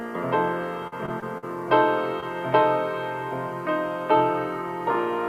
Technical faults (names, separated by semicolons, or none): repeated packet loss (robotic sound); short concealed packet loss